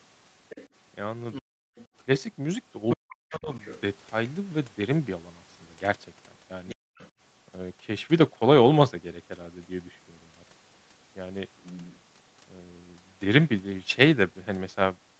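A second voice, most likely the other side of the call leaking through an echo canceller that did not fully remove the loudspeaker sound, appears faintly at 0.49 to 0.68 s, 1.33 to 1.87 s, 2.89 to 3.81 s and 6.68 to 7.1 s. It sits around 20 to 25 dB below the main speech.

From 1.42 to 1.75 s, the background is gated by the echo canceller. The canceller clamps the microphone while the loudspeaker plays, so the room sound drops by about 40 dB for roughly a third of a second and then returns. The same gating happens again from 6.75 to 6.97 s, lasting about 0.2 s.

Between 2.96 and 3.51 s, the speech is suppressed in double talk. It dips by roughly 40 dB in pieces totalling about 0.3 s. The likely cause is that the canceller could not separate the talker from the simultaneous loudspeaker echo and turned both down. Throughout the clip, the call path limits the audio to 8 kHz.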